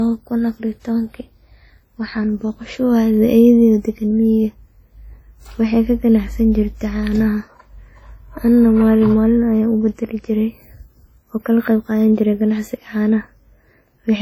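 From start to finish the speech carries the artefacts of a heavily compressed source, likely low-bitrate audio saved at a high bitrate. The artefacts fit a lean first encode near 32 kbit/s, later re-encoded as generous MP3. A spectrogram shows energy ending near 20.1 kHz.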